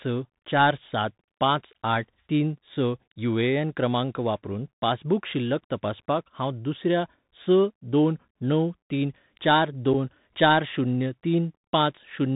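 A speech clip with a narrow, muffled sound throughout: nothing above 4 kHz gets through, s sounds come out scratchy, loud high parts break up, and a fine granular hiss sits beneath the voice. This is the Bluetooth CVSD headset codec, which sends one up-or-down bit per sample at 64 kbps with an adapting step that fails to keep up with fast changes. At 9.93 s, between "तीन चार" and "चार शून्य", a hole of about 7.5 ms cuts in with abrupt edges, and the speech returns briefly quieter. This is unconcealed Bluetooth headset packet loss: a couple of voice packets between headset and phone went missing and were replaced by silence or an idle pattern rather than patched over.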